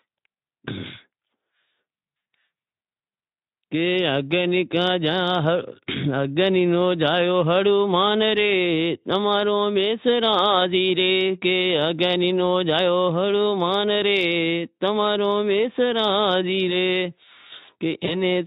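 Right near the end, at about 18.05 s, there's a short bout of VoIP packet loss concealed by the speech codec. The sound points to a single lost 20 ms frame. The Speex decoder papered over the hole by carrying its last pitch and filter forward at a dropping gain, so you get a brief stretched, fading smear. Because each frame builds on the one before, it stays a bit off until around 18.22 s, layered over Speex's light coding colour.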